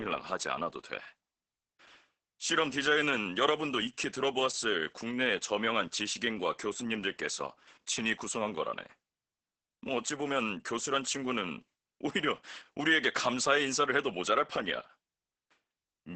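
From start to finish the speech carries Opus voice compression. Nothing survives above about 8.8 kHz, a wideband cutoff. The damage is heavy: the SILK linear-prediction coder models the vocal tract and spends too few bits on the excitation, so voices turn hoarse and faintly robotic, which fits a bitrate near 10 kbps. A simple low-pass filter would only dull the top end. Here the texture of the voice itself is coarsened.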